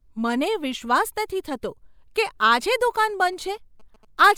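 From 2.62 to 4.29 s, after "થતો કે", a nearby phone's rectified GSM signalling bursts gallop as faint short 217 Hz buzzes, unlike steady hum.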